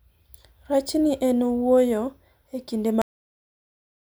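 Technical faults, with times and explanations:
3.02 s to the end, cut-off end: the speech stops mid-sound at 3.02 s and drops straight into dead digital silence for the last second or so. There's no tail, no decay of the syllable, nothing fading out. The recorder or playback chain never got the final buffers written out, so whatever was still in flight just vanished and the file was closed with the sound sliced off partway through.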